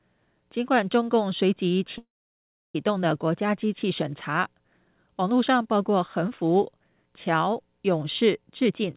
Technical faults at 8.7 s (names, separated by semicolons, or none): jitter buffer speed-up